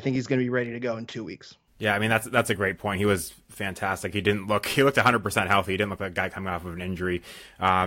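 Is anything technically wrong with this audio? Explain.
No, nothing is technically wrong with this audio.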